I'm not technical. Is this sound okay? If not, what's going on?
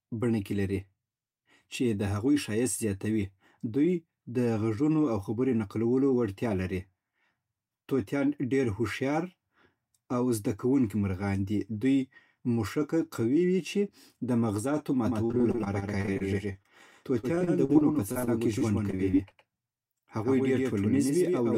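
No. Right after "وي چې د مغزاتو", at 15.06 s, the speech starts to sound doubled, with a slightly quieter copy trailing about a tenth of a second behind until the end. This is a doubled audio track, likely the same sound captured twice through paths of different speed.

From 15.25 to 16.67 s and again from 17.21 to 19.33 s, the speech turns choppy and robotic, with small pieces missing. This is repeated packet loss: over a dozen tiny chunks, each up to about 40 ms, were lost and patched by stretching the preceding sound.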